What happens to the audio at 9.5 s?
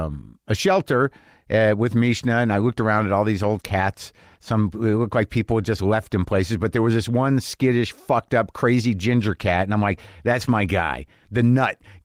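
Nothing goes wrong at 9.5 s: the speech there carries on intact, with only the light, even coloration of the Opus voice compression that runs through the whole clip.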